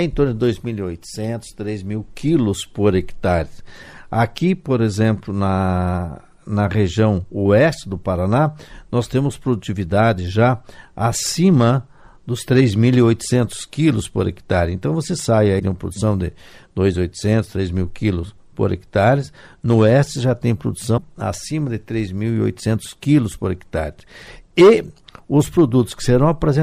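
At 15.58 to 15.61 s and again at 20.97 to 20.99 s there's a quick garbled blip, roughly one 26 ms frame long, where the audio skips ahead. Likely a broken MP3 bit reservoir: frames went missing, so the next frame pulled its borrowed bits from the wrong data.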